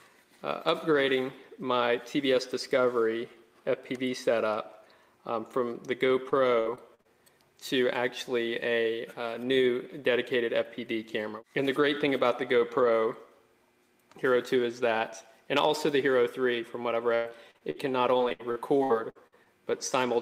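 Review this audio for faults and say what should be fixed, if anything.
Repeated packet loss (robotic sound) occurs at 6.29–7.07 s, 17.15–17.77 s and 18.17–19.47 s. Each stretch is a run of short holes (the longest about 53, 103 and 70 ms) patched by stretching the preceding sound, which leaves a choppy sound with pieces missing. Plain dropouts would fall silent, but here the gaps are filled. A larger jitter buffer and forward error correction on the network link would prevent this.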